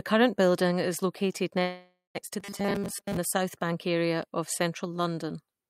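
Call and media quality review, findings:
Call audio freeze, 1.61 to 2.17 s, right after "current building is located". Likely jitter buffer underrun from delayed packets. Receiver extends last sound as fading buzz or hiss for about 0.54 s, ending in 130 ms silence. Audio resumes where it stopped, nothing lost, delay now 0.54 s longer.

Robotic sound from repeated short buffers, 2.40 to 3.17 s, just before "the south bank area". Likely starved playout loop re-playing a 5 ms block while real audio is skipped. Most of the stretch is repeats, imposing a rigid metallic 200 Hz buzz over the speech.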